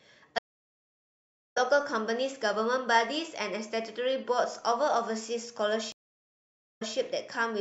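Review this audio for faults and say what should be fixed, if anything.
Stream reconnect at 0.38 to 1.58 s and 5.92 to 6.96 s: the connection dropped, leaving about 1.2 s and 0.89 s of silence. Then a fresh decoder restarted mid-stream, first skipping roughly 0.7 s, then repeating 0.16 s. Fix by buffering enough to ride out drops and resuming from the exact byte offset rather than restarting.

MP3 compression throughout: plainly audible watery, swirly treble with smeared attacks on the speech, likely from MP3 encoding at a low bitrate, which fits about 64 kbps. Fix by encoding at a higher bitrate or using a more efficient codec for speech.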